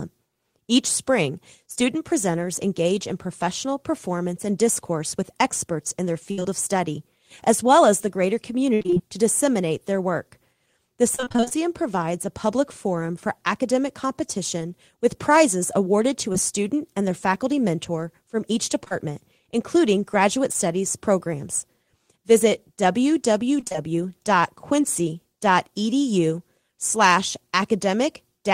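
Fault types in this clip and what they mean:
Repeated packet loss (robotic sound): Choppy stretches where the speech stutters and pieces drop out, at 6.31–6.46 s (after "with experts in their"), 8.74–9.01 s (after "well as the greater"), 11.15–11.53 s and 23.60–23.76 s. Each stretch holds several closely spaced dropouts, the longest about 60 ms. The receiver patched each one by extending the preceding sound, so half or more of every stretch is synthetic fill.
Short concealed packet loss: Brief smears or wobbles, each covering roughly 20 ms of lost audio, at 16.33 s (after "with prizes awarded to"), 18.84–18.93 s (two back-to-back losses, so slightly longer), and 20.53 s. Each hole was filled by continuing the last sound, following its pitch where voiced and as shaped noise where not, then cross-faded back into the real signal. The fill is short enough to pass as a small wobble.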